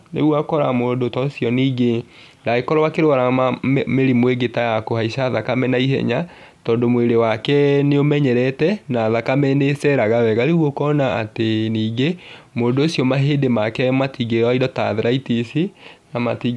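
Nothing stood out on listening to the speech in this recording.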